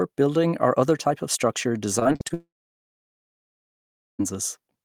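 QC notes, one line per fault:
1.99–2.32 s, repeated packet loss (robotic sound): right after "other type of structure" the sound turns choppy and robotic. Five short holes, the longest 41 ms, are patched by stretching the previous sound, covering about a third of the span. The spectrogram shows repeated smeared, stuttering blocks.
2.34–4.21 s, long network dropout (likely cause): the sound briefly continues as a fading buzz or hiss, then about 1.7 s of near-silence follows before audio resumes with that stretch missing. The waveform shows a short decaying tail and then a flat line, and the spectrogram goes almost empty.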